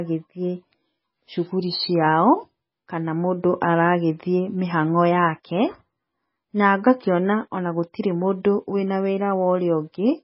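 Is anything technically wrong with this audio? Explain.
Yes. MP3 compression damage runs throughout: nothing is heard above 5.6 kHz, and the speech sounds watery and swirly, with chirpy s sounds. This is likely heavy MP3 encoding at a very low bitrate, around 16 kbps, which cuts the treble and starves weak frequency lines so they flicker from frame to frame.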